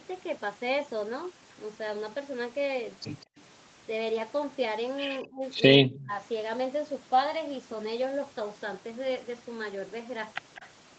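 Speech suppressed in double talk at 3.25–3.38 s, 5.24–5.43 s and 5.84–6.17 s: the speech dips sharply, by roughly 35, 25 and 20 dB, likely because an echo canceller ducked both sides while they overlapped. Echo leak at 5.95–6.04 s and 10.55–10.68 s: a faint copy of the speech, about 25 and 30 dB down, trails by 202 ms, likely loudspeaker pickup the canceller missed.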